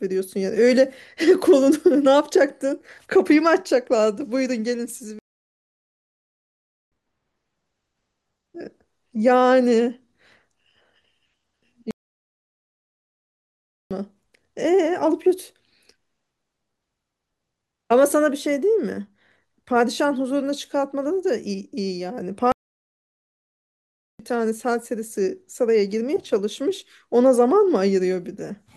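At 5.19 s the speech cuts off mid-flow and the output sits in silence for about 1.7 s, resuming at 6.92 s. The same playback stall recurs from 11.91 s to 13.91 s, lasting 2.0 s, and again from 22.52 s to 24.19 s, about 1.7 s. Each gap sounds like an abrupt dropout with no fade. The likely cause is the player running short of buffered data, or its output thread being blocked, until it recovered.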